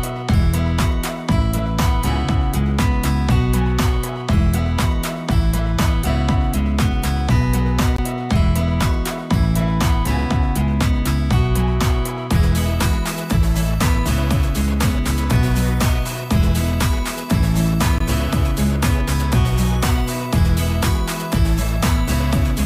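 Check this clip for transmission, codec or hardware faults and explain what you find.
Two brief hard-edged dropouts interrupt the audio: a gap between chunks at 7.96–7.98 s and again at 17.98–18.00 s. Each is a 20 ms clean hole, repeating every 10 s, where silence was inserted at the joins between chunks.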